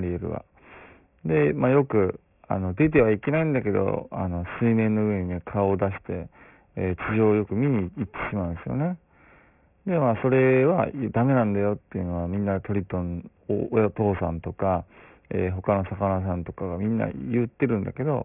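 Aliasing runs throughout the speech, from start to finish. The audio appears to have been downsampled to about 6 kHz without an anti-aliasing filter, so content above 3 kHz folds back below it, giving gritty, metallic sibilants with spurious tones roughly 20 dB under the voice.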